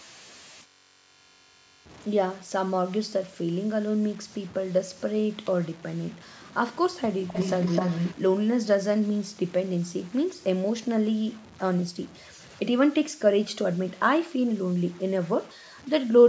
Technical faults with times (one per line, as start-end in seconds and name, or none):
0.00-16.29 low bit depth without dither
7.27-8.15 echo leak